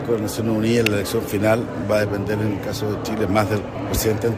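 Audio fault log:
0.86 s, electrical switching spike: a sharp snap lasting only a few milliseconds, peaking around -5 dBFS. It is likely a nearby switch or static discharge arcing and coupling into the audio line, which adds an abrupt voltage jolt rather than changing the sound itself. On the waveform it is a thin, tall spike; on a spectrogram, a narrow vertical stripe spanning nearly all frequencies.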